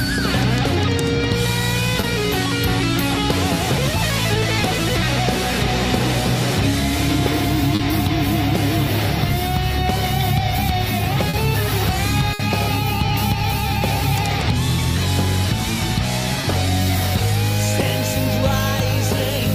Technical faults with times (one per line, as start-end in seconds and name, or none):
2.01-2.05 short concealed packet loss
7.75-7.81 short concealed packet loss
11.29-11.35 short concealed packet loss
12.33-12.41 burst of packet loss
16.41-16.45 short concealed packet loss